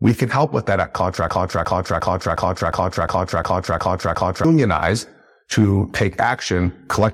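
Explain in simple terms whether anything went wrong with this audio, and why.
The player or stream likely stalled and kept resending its last snippet. This broken-record loop repeats one 0.36-second piece nine times, from 1.29 to 4.45 seconds, losing the speech there.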